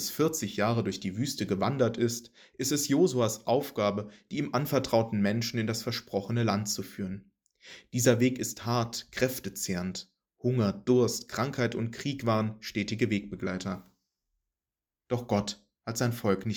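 From 1.15 s to 15.02 s, a short click recurs every 2.31 s, about seven in all. These are clock drift buffer slips. Two clocks likely disagree by roughly 70 ppm. The buffer drifts until a few samples are dropped or repeated.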